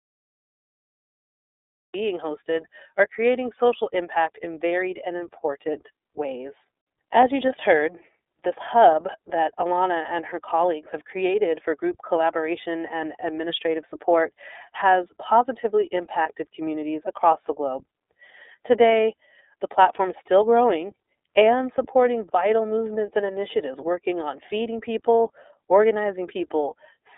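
The speech clip runs through an iLBC codec for its whole length, limiting the audio to a telephone band of roughly 300 Hz to 3.7 kHz with nothing above 4 kHz. The coding damage is plainly audible as a slightly rough, synthetic edge on the voice. It uses iLBC's 30 ms frame mode at a rate near 13.3 kbps. It differs from a simple low-pass filter because the graininess sits inside the band, not just in the missing top end. The clip has a cut-off start: it holds digital silence from 0 to 1.94 s, then begins abruptly in the middle of a sound with no attack, just before "hosted are creating social". A fade-in or a quiet lead-in would have a gradual rise or a noise floor. Here the level jumps straight from digital silence, which shows the recording or stream started late. At 16.23 s, between "administrative support has positively" and "communities across the globe", there are lost iLBC frames: a single 30 ms frame drops out. 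The decoder fills it by repeating the last pitch cycle with some added noise, giving a brief held, faintly buzzy vowel. A hard dropout would leave silence or a click instead. Because each iLBC frame is decoded independently, the voice is clean again immediately afterward rather than smearing over the following frames.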